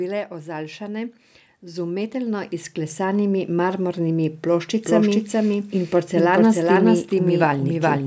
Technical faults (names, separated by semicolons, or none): automatic gain rising; doubled audio track